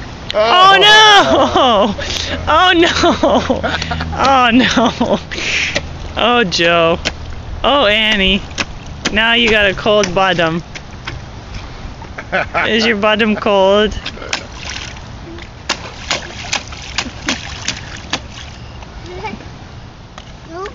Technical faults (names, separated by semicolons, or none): none